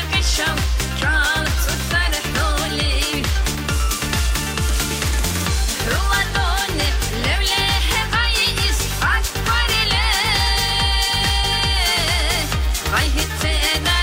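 At 11.43 s, compressed frames are skipped. The sound jumps ahead roughly 50 ms, about two 26.1 ms frames.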